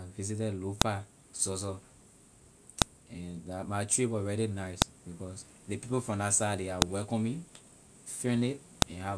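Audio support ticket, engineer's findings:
File header played as audio: sharp snaps at 0.82, 2.82, 4.82, 6.82 and 8.82 s, exactly every 2 s regardless of the speech. The chunk joiner is leaving WAV headers in, unlike randomly timed clicks.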